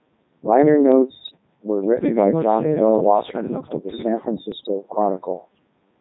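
Robotic, buzzy speech runs through the whole clip, with a flat synthetic quality and a smeared, sine-like tone. That is the Codec 2 vocoder at heavy damage. Its rate points to the 3.2 kbit/s mode. The decoder never keeps the original waveform. It sends only pitch, voicing, energy and a coarse spectral envelope, then rebuilds the speech from sine waves, so natural texture and breath are lost.

From 1.23 to 1.37 s, and again from 4.52 to 4.68 s, the synthetic speech lurches in pitch and level and breaks into a short warble and robotic gibberish. These are bit errors on digital voice radio, at a rate of a few percent. At such a low bitrate each flipped bit corrupts the pitch, loudness, voicing or spectral settings of a whole frame. The damage here fits a handful of frames in each burst, five in the first and seven in the second.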